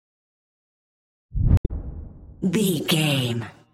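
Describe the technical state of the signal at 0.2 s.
At 0.2 s the signal is intact, with no audible dropout, distortion, noise burst or other fault at that moment.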